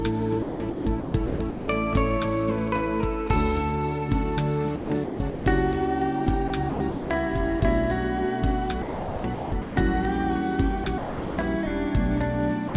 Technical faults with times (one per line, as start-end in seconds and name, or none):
0.42-1.68 sound chopped by the voice detector
4.76-5.46 sound chopped by the voice detector
6.48-7.10 sound chopped by the voice detector
7.60-7.62 sound dropped by the voice detector
8.82-9.76 sound chopped by the voice detector
10.84-11.38 sound chopped by the voice detector
12.68-12.74 sound dropped by the voice detector